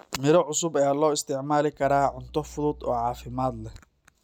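A ground loop or a nearby power transformer lets the 60 Hz mains supply leak into the signal path from 1.83 s to 3.76 s, starting right after "loo isticmaali". This mains hum sits roughly 20 dB below the speech, a steady low drone with some low harmonics above it, running under the talking for almost two seconds.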